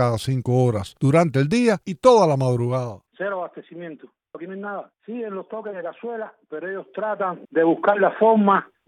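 From 2.5 to 3.54 s the level drops by roughly 15 dB with zipper noise, and from 6.76 to 7.74 s it climbs back by a similar amount. Each move is made in unsmoothed steps, around 50 a second, and every step leaves a small click, giving a fast ticking buzz over the sound.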